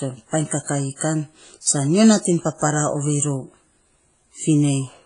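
Throughout the speech, a ringing, washy quality and signal-following hiss are heard, with nothing above 10.1 kHz. This likely points to heavy WMA compression near 24 kbps. At 1.61 to 1.66 s, pre-echo appears. Block-spread quantisation noise puts a 51 ms hiss before an attack, softening and smearing it.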